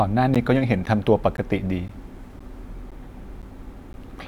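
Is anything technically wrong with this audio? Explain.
Yes, there's a gap between chunks. The speech is cut by 12 ms holes at 0.35, 0.86, 1.37, 1.88, 2.39, 2.91, 3.42 and 3.93 s, every half second, where silence sits between 0.5 s chunks. You hear short dropouts ticking along at a steady rate.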